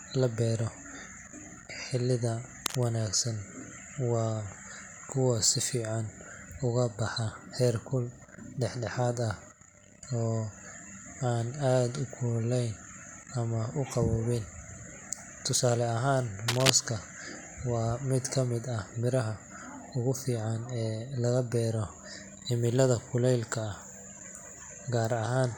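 A short burst of scratchy, rustling noise cuts across the speech from 2.66 to 2.84 s, sitting a little below the speech level, and a second, louder burst from 16.48 to 16.70 s rises above it. This is cable scratch noise, most likely from a worn cable or connector being moved, its contact resistance jumping about and splattering dense, uneven crackle into the signal for a fraction of a second each time.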